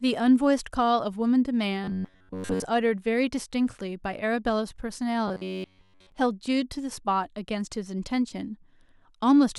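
Audio likely reached the playback software too seldom, so it kept re-sending the last chunk of about 10.7 ms while most of the real audio was dropped. That produces robotic sound from repeated short buffers from 1.84 to 2.64 s and again from 5.28 to 6.12 s. Each time, the speech collapses into a rigid, metallic buzz locked at 93.8 Hz, still tracking the rough shape of the words.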